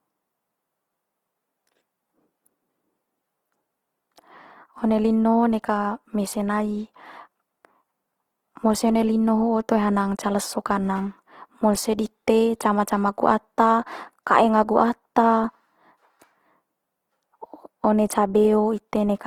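Throughout the speech, the likely cause is Opus compression in its music (CELT) mode at a low bitrate, consistent with about 16 kbps. Starved bands are filled with folded or noise content, so the full-band sound turns plainly rough, grainy and noisy rather than swirly.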